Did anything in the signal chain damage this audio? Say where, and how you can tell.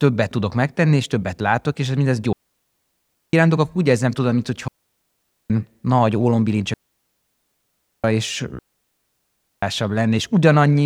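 Yes, the damage is in the wireless link, before recording: a digital wireless dropout. The speech cuts to near silence after "többet látok és mindez" at 2.33–3.33 s and returns at "akkor úgy érzem tudom". It cuts again after "úgy érzem tudom mint" at 4.68–5.50 s, then at 6.74–8.04 s and 8.59–9.63 s. The receiver lost too much data and muted with a very fast fade. The waveform shows flat gaps and the spectrogram shows blank columns, with no noise burst at either edge.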